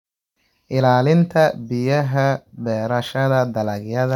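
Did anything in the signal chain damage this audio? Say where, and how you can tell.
No, nothing in the signal chain damaged this audio.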